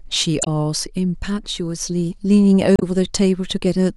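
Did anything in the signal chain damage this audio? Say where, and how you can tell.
Yes, at the codec stage: damaged data in a compressed stream. Two brief glitches cut into the speech, from 0.41 to 0.47 s and from 2.76 to 2.82 s. Corrupt bytes made the decoder misread frames. It lost sync and searched for the next valid header.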